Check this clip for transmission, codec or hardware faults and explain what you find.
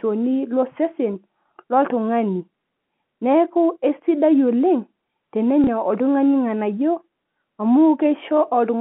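One transmission fault stands out in this speech, a packet loss with the last packet repeated, from 5.64 to 5.67 s. About 30 ms of audio went missing, which fits one lost 30 ms packet, and the receiver filled the gap by replaying the previous chunk. The single repeat gives a small blip. On a waveform the 30 ms block repeats; a spectrogram shows a duplicated slice. The G.711 A-law telephone coding confines everything to roughly 150 to 3400 Hz.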